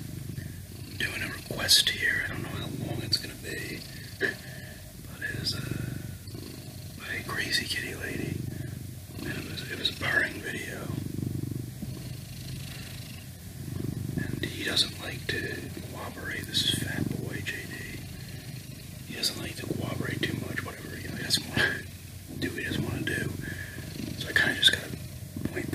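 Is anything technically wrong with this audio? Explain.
No, nothing technically wrong can be heard here.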